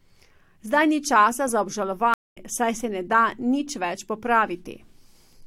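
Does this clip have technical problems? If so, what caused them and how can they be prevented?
Yes. Just after "ni časa za", the speech drops to silence from 2.14 to 2.37 s (about 0.22 s), then picks up roughly a fifth of a second further on, skipping some material. This is a stream reconnect: the connection failed, and the player reconnected and restarted its decoder mid-stream. Buffering more audio ahead and letting the client resume from its last received position would prevent it.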